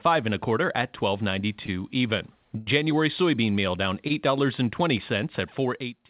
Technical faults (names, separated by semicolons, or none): short stall from a late packet; loudspeaker feedback squeal